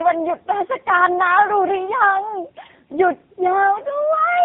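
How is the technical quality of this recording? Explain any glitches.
The quality is poor throughout, because of tandem speech coding. Two speech codecs in a row recompress the already degraded speech, making it rough, muffled and warbly. On a spectrogram, harmonics smear and nothing shows above 3.8 kHz.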